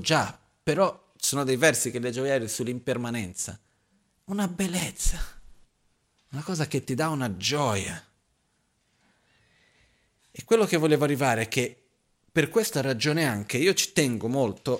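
No technical fault can be heard anywhere in the recording: the signal keeps a steady level, unbroken timing and a consistent frequency balance from the first moment to the last.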